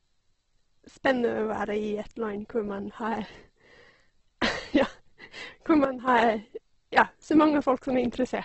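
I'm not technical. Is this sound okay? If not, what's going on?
No. The speech was likely squeezed hard by Opus compression, which saves space by approximating the sound. Here that leaves it grainy and rough, and everything above about 8.2 kHz is gone, so the top end sounds dull.

There is also a sudden gain jump: the volume setting likely changed abruptly without a smooth fade. From 5.85 to 6.08 s the speech and its background noise both drop sharply in level together, then snap back up.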